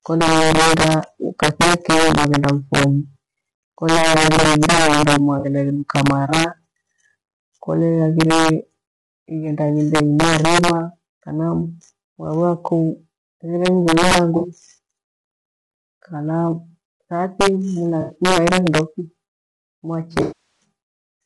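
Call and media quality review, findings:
Integer overflow throughout: harsh cracks on loud speech peaks, far sharper than clipping. Level runs about 7 dB past full scale, so peaks wrap to the opposite sign instead of limiting. Only a small fraction of samples affected, concentrated on the loudest syllables. Component: gain or mixing stage using unsaturated integer arithmetic.

Rough, grainy speech throughout, with noise filling the gaps between harmonics and a thin, synthetic-sounding top band. Likely cause: low-delay AAC compression (AAC-ELD), short frames resolving pitch harmonics poorly. Artefacts plainly audible, consistent with a bitrate around 32 kbps.

AAC frame loss with concealment at 5.39–5.45 s, just before "igheduka mara", 14.37–14.47 s and 18.01–18.15 s: brief smeared, phasey patches, roughly 40, 60 and 80 ms. Consistent with two to four lost frames, decoder repeating the last good spectrum.

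Longer AAC frame loss with concealment at 20.21–20.64 s, about 400 ms. Extended concealment decays toward silence, then fades back in. Consistent with roughly twenty consecutive lost frames, beyond what spectral repetition can cover.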